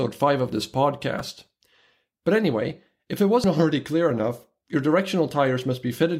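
Just after "of this" (1.18–1.20 s) and "anyway if it" (3.44 s), damaged data in the compressed stream makes the decoder lose sync, giving short glitches.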